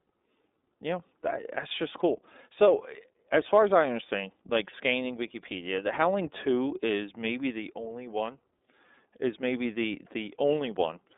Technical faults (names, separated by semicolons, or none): iLBC codec